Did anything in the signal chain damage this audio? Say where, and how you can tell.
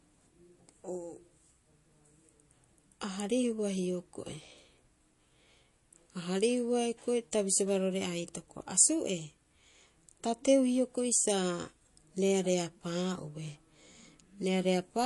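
Yes, at the codec stage: MP3 compression is the likely cause, heard across the whole speech clip. Nothing sounds above 11.3 kHz, and the sibilants turn watery and swirly, which fits a low bitrate of around 48 kbps. Unlike a plain low-pass filter, weak frequency content flickers on and off between frames.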